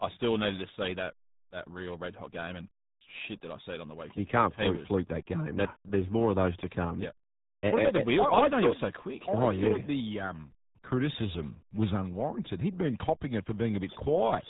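RealAudio 14.4 codec damage runs through the whole clip, from start to finish. This low-rate speech coder, built for dial-up delivery, models the voice with a small set of parameters rather than keeping the waveform, and the heavy damage here fits its 8 kbit/s mode. Nothing above about 3.8 kHz survives, so the speech sounds muffled and boxed-in, while the coarse modelling leaves a gargling, watery texture on the voice.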